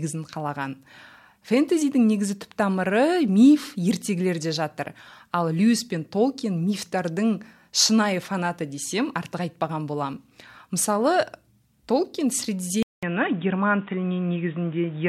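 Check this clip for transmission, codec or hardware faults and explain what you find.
One fault appears, near the end. At 12.83 s the recording most likely switches its input to a poorer device, such as another microphone or a headset's call profile. That device passes a narrower band, so nothing above 3.8 kHz survives and the speech turns dull and boxy. About 200 ms of silence marks the switch, and a faint new background noise sits well under the speech. The loudness stays much the same through 15.08 s.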